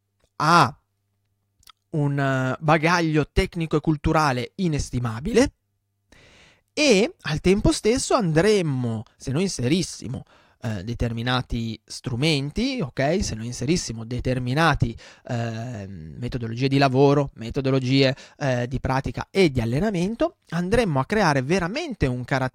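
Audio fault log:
10.37–10.71 s, processor overload crackle: between "andremmo se noi inserissimo" and "determinati strumenti ok" the speech picks up a gritty tearing as the processor falls behind and misses a handful of very short buffer deadlines, each under a millisecond long, over that short stretch. Each missed buffer drops to silence with hard edges, so the waveform shows tiny flat gaps notched into the speech, and the spectrogram shows thin vertical broadband streaks clustered across that third of a second.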